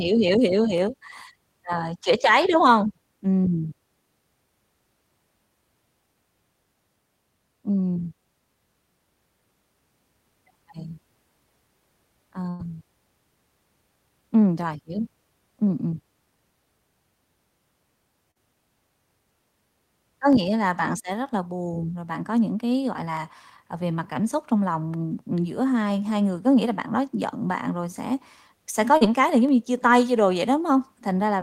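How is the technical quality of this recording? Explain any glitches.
The recording has three kinds of transmission and playback glitches, scattered across the speech.

Dropped samples: four isolated sharp clicks, at 0.78 s, 20.33 s, 23.17 s and 29.49 s. Each is a single hard tick with no gap in the speech around it. The likely cause is a tiny slice of the stream, a fraction of a millisecond, going missing, so the waveform jumps straight from one value to a later one. That step discontinuity is heard as the click, far too brief to remove any audible sound.

Burst of packet loss: from 12.49 s to 12.61 s the speech stops progressing and is replaced by a held, fading continuation of the last sound, before resuming further along. About 100 ms of audio never arrived in time. The receiver bridged roughly 96 ms of it by extending what it last had and turning it down, so the join sounds like a sustained buzz or hiss that dies away, with the words in between simply missing.

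Short concealed packet loss: at 18.31–18.37 s and 28.97–29.03 s there are brief smears, a momentary wobble in the sound rather than a clean gap. In each case about 40 ms failed to reach the decoder. The receiver patched the hole, for about 42 ms and 35 ms respectively, by continuing the preceding sound and then blending back into the real audio. Because the patch is so short, it reads as a small blur.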